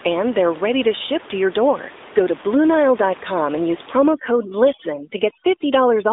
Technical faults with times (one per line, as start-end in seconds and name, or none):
0.00-6.13 AMR narrowband mobile codec
4.13-6.13 overdone noise removal